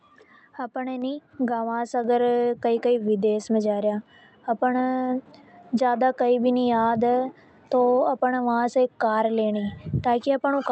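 Microphone volume stepped up at 1.02 s, just after "अपन ए": the call software judged the input too quiet and raised the device gain in a single step of about 4 dB, so speech and background noise jump louder together mid-phrase, over a band that stops near 8 kHz.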